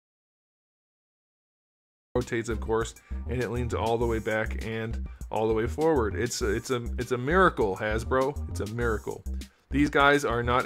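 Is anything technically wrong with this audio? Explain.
Yes. The clip opens with an audio dropout to silence that is already under way when it begins and lasts until about 2.16 s, when sound arrives abruptly mid-flow. The gap is complete silence with no room tone, which sets it apart from a natural pause or a quiet lead-in, where some background noise would remain. The likely cause is a lost input that the recorder kept filling with silence, so whatever occurred during that stretch is gone.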